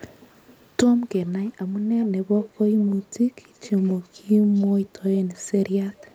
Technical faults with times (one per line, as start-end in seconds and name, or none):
2.00-2.06 echo leak
2.42-2.50 echo leak
2.80-3.14 echo leak
3.55-4.07 echo leak
4.55-4.64 echo leak
5.34-5.42 echo leak